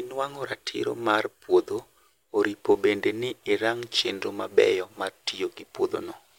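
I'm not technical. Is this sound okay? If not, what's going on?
Yes, this sound is okay, and there's nothing going on with it that needs fixing.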